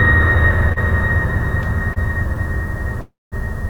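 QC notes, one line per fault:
0.72–0.78 s and 1.93–1.98 s, short stall from a late packet: the jitter buffer ran dry, so the music holds for about 37 ms, then 26 ms, with nothing lost.
3.01–3.34 s, call audio freeze: packets were likely held up in transit, so the last sound is stretched into a fading buzz, then about 190 ms of silence, before resuming intact.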